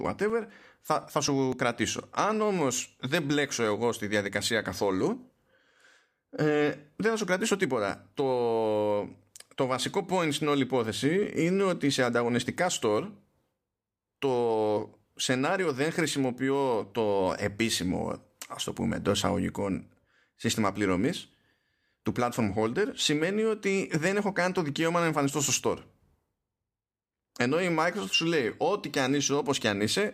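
From 0.05 s to 1.77 s the speech has periodic USB or driver dropouts. Every 0.25 s a few milliseconds of audio are skipped, producing about seven small ticks. Their strict, clock-like spacing, rather than scattered timing, sets them apart from random buffer glitches.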